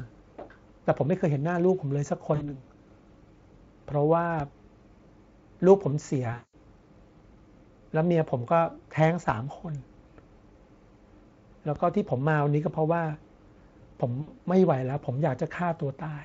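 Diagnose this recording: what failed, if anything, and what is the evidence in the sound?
Network stage first: this is VoIP packet loss concealed by the speech codec, which sits on top of a clean Speex stream at a fairly high quality setting. At 2.35 to 2.59 s, 6.33 to 6.54 s and 14.21 to 14.33 s, the speech smears into a buzzy, fading tone. The decoder is guessing from its last pitch and filter while turning the gain down. About 60 ms, 200 ms and 60 ms went missing, and each dropout runs a bit longer because the decoder needs a moment to lock back on.

Separately, there's a DC step at 4.40 s, 9.29 s and 11.76 s, which looks like the converter or analogue input end. Each one is a low thump or click while the speech carries on untouched. The waveform's zero line jumps, probably from an offset being switched in or a recalibration. A 20 Hz high-pass then bleeds the offset away, so each step becomes a brief low-frequency bump rather than a lasting shift.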